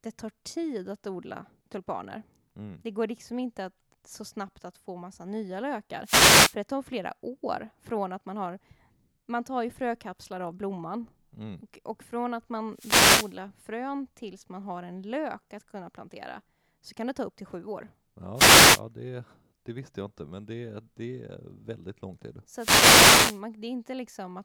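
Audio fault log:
6.03–6.56 s, 12.73–13.37 s, 18.34–18.81 s, 22.55–23.42 s, wireless microphone noise hit: the FM radio link fades as reflections cancel, so receiver hiss swells into a brief static swish over the speech. Unlike a digital dropout, the gap fills with noise, not silence.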